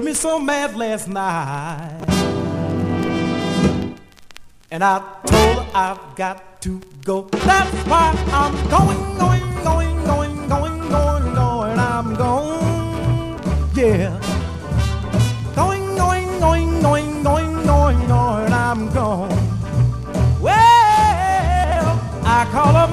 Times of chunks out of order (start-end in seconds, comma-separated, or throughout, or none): 2.00-2.08, 21.64-21.76